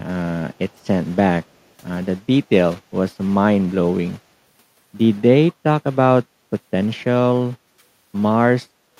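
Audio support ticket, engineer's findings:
Echo leak, 0.69–0.87 s: far-end echo canceller likely let loudspeaker pickup through; faint delayed copy of the speech, about 190 ms behind, very low in level.

Background gated by the echo canceller, 7.68–7.8 s: canceller ducked the microphone during loudspeaker playback; room sound dips by about 10 dB for roughly a tenth of a second, then recovers.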